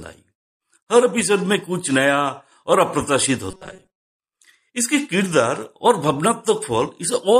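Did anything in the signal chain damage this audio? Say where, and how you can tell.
Yes: robotic sound from repeated short buffers at 3.51–4.14 s. That rigid 188 Hz buzz means roughly 5 ms chunks looping, likely from a starved driver buffer.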